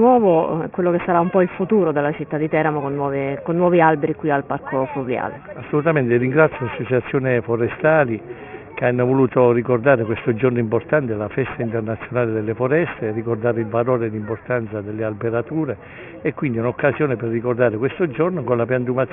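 Aliasing runs through the whole clip. Content above 3 kHz folds back below it, which points to resampling to about 6 kHz without an anti-alias filter. Gritty, metallic tones sit roughly 20 dB under the sound, crowding the 3 kHz edge.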